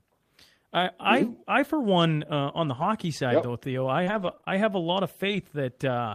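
A speech recording with two kinds of network fault. At 2.81 s, between "one uh on the" and "side yep though", and from 5.24 to 5.38 s after "a lot of", the sound turns briefly rough and noisy without dropping out. This is lost packet rebuilt from error correction: the decoder played low-bitrate copies carried in later packets, about 80 ms of it in the second spot. From 4.03 to 4.48 s the audio goes choppy and robotic, with five short holes (the longest 33 ms) and pieces missing. This is repeated packet loss, with each gap patched by stretching the previous sound.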